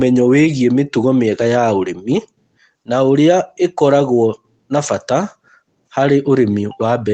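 Nothing goes wrong anywhere in this bit of speech, which simply arrives over an ordinary call connection with its top end rolled off around 8 kHz, the way that kind of link normally sounds.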